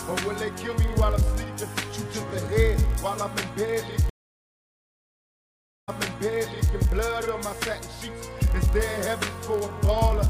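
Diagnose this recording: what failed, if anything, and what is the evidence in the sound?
Block size mismatch (padded), throughout: a steady 43.1 Hz buzz, consistent with a buffer stage zero-padding short writes into 1024-sample reads, with playback running at 0.999 speed.

Stream reconnect, 4.10 to 6.74 s: a network dropout leaves 1.78 s of silence, then a fresh decoder resumes playback 0.86 s earlier, repeating material.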